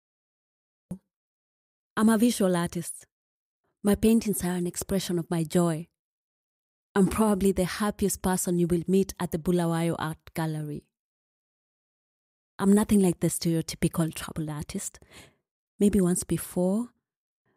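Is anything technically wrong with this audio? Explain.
Yes, it has a cut-off start: digital silence until 0.91 s, then the speech begins abruptly mid-sound because capture started late, showing as a flat line jumping straight to an already-sounding waveform.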